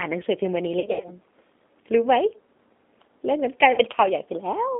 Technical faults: G.729 codec; VoIP packet loss concealed by the speech codec

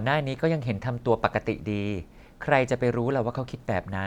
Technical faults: none

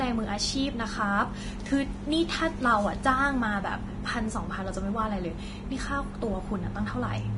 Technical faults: Vorbis compression

